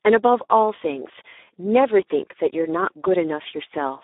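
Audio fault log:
Throughout, Speex codec. The speech sounds hoarse, buzzy and noisy. This is a CELP coder starved of bits for its excitation signal, so the fine structure of the voice is replaced by coarse, noise-like pulses. The damage fits a setting near 8 kbps. The audio sits in a narrow telephone band of roughly 300 Hz to 3.7 kHz, with nothing above 3.8 kHz, so it sounds thin and muffled.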